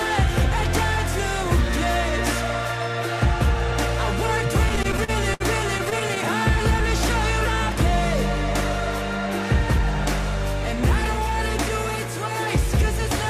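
Repeated stalls (stutter) occur from 4.69 to 5.42 s (seven gaps, longest 60 ms) and from 5.78 to 6.18 s (six short gaps): packets arrived late, the jitter buffer kept emptying, and the receiver stretched the last sound, so the audio drags without losing content, showing as smeared, repeated spectrogram frames.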